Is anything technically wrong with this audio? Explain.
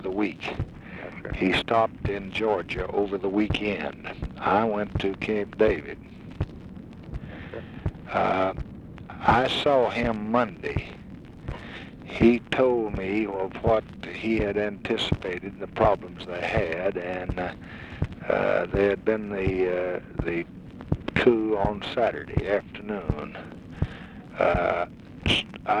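No, nothing technically wrong turns up in this audio on listening.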